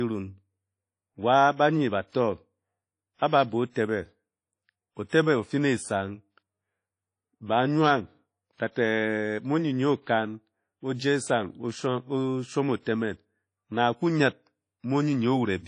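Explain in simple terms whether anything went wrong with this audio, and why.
The whole recording sounds dull and watery, with a hiss that rises and falls as the person talks, and nothing above about 10.1 kHz, so the crisp top end of consonants is missing. The likely cause is WMA compression squeezing the file hard: the codec works on chunks of sound, throws away detail it judges unimportant, cuts off the highest frequencies, and leaves a smeared, ringing quality behind.

At about 5.08 s there is a brief burst of hiss, roughly 46 ms long, just before a sharp sound starts, and that sound's onset comes across soft rather than crisp. This is pre-echo. The codec spreads its noise across a whole chunk of audio, so the noise meant to hide under the loud onset also spills into the quiet moment just before it, where it can be heard.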